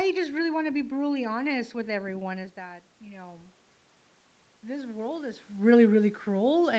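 Speech with automatic gain rising twice, from 1.86 to 3.63 s and from 4.61 to 5.5 s: as the talker moves back, the input falls about 14 dB and the gain gradually climbs about 4 dB, swelling voice and room noise together.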